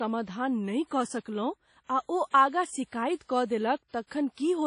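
Throughout the speech, nothing is present above 10.1 kHz and a washy, ringing hiss breathes with the signal, likely WMA compression at a bitrate around 32 kbps. From 0.87 to 0.91 s, pre-echo smears about 41 ms of codec hiss ahead of an attack, leaving the onset soft and blurred.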